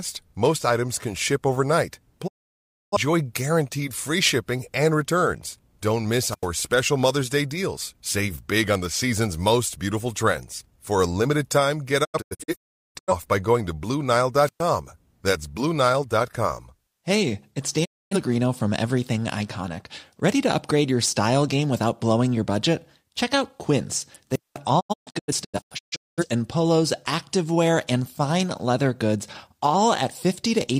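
At 2.26 to 2.97 s the speech ducks out in a quick 20 ms fade. That's a digital broadcast dropout: the receiver lost good frames and muted, so about 640 ms of programme simply never arrives. The hole lengths fit frames of roughly 43 ms.

Around 6.26 to 6.48 s you get a wireless microphone squelch dropout. The FM signal sags, hiss swells briefly, then the squelch mutes for about 88 ms before the voice comes back.

From 12.03 to 13.13 s it's the broadcast dropout again, but chopped up. About 725 ms is lost in several holes scattered across roughly a second, and the longest gap is 384 ms.

At 14.44 to 14.63 s the squelch dropout returns: a rise of hiss, then a mute of about 116 ms.

A cleaner single broadcast mute hits at 17.84 to 18.16 s, taking out 256 ms.

At 24.31 to 24.58 s there's the longest squelch hole, about 202 ms, with a rise of hiss before it.

Right after that, from 24.79 to 26.24 s, the broadcast dropouts come back scattered. 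About 853 ms disappears across 1.37 s, with the longest single gap 213 ms.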